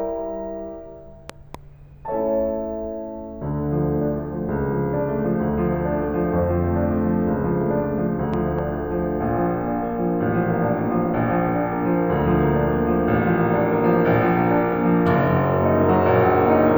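At 1.30 to 1.57 s and again at 8.34 to 8.61 s, a loud pop cuts through the music as a pair of sharp thumps, peaking well above the music, around 10 dB and then 5 dB, while the music carries on underneath. The likely cause is a voltage step from a plug, switch or static. The waveform shows two tall spikes at each, and the spectrogram shows thin vertical broadband stripes.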